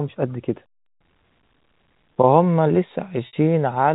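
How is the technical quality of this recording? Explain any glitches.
One glitch stands out near the end, in speech that is band-limited to the telephone range by G.711 coding. From 3.27 to 3.33 s there is packet loss with pitch repetition. About 60 ms of audio went missing, which fits two lost packets. The receiver filled the gap by repeating the last pitch period and fading it out. The speech briefly holds on a slightly buzzy tone, then cross-fades back in.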